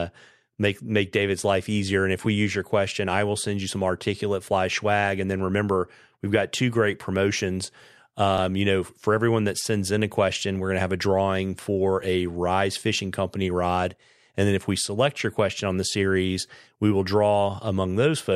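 At 2.25 s, just before "we use your question", and again at 8.38 s, just before "you know for everyone", the speech shows a repeated buffer. New audio arrived late, so the output played its last block a second time. Each repeated piece is very short, which fits a buffer of about 10 ms, so the two hard joins register as a brief click or buzz rather than a stutter, and nothing seems to be skipped afterward.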